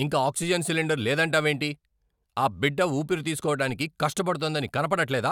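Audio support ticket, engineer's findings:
Low thump at 3.70 s, right after "ఆ బిడ్డ ఊపిరి"; speech carries on unaffected. DC step: waveform zero line jumps by about -39 dBFS, then the offset bleeds away through a 5 Hz high-pass. Probable component: converter recalibration or offset input switched in.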